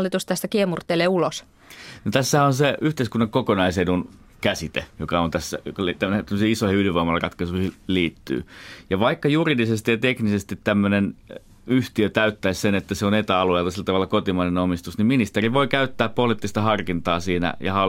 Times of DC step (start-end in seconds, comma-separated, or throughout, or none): 15.45-17.89